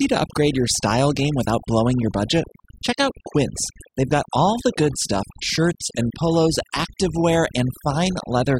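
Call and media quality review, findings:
Overdone noise removal, throughout. Background drops between phrases, with twinkling specks. Noise suppressor set too aggressive: bands near its noise estimate are cut hard or gated, taking low-level speech detail with them.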